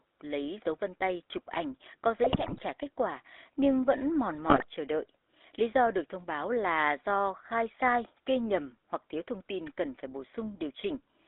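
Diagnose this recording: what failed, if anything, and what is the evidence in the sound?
The failure is in the codec stage. The whole clip carries GSM full-rate codec damage, plainly audible. The speech has a buzzy, gravelly roughness. Nothing reaches above about 3.6 kHz, and the low end stops near 300 Hz. That points to a 13 kbps full-rate link. This codec models the vocal tract and excites it with a sparse, regularly spaced pulse train. Fine excitation detail is lost, so the rasp remains.

There are also GSM bit errors in the network stage, heard in two bursts. The first runs from 2.24 to 2.64 s, after "tay chụp ảnh có" and before "kết quả nhưng vẫn". The second runs from 4.47 to 4.64 s, after "quả nhưng vẫn mòn" and before "chờ đợi". Both break into squawks and gargling. The error density fits about 2.4% and 3.6% of bits flipped. Corrupted filter, pitch and gain values distort each 20 ms frame.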